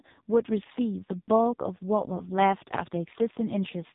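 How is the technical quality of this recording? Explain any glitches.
The technical quality is poor: the whole recording of speech has passed through an AMR narrowband mobile codec, heavily damaged. Throughout, nothing above 3.8 kHz survives, so the voice sounds boxed in and telephone-like. The codec models the vocal tract and drives it with a few pulses per short subframe, and at a starved setting, consistent with one of the lowest modes near 5.15 kbps, that model produces a buzzy, synthetic, robotic timbre. A simple low-pass filter would only muffle the sound; this codec also makes the voice itself sound artificial.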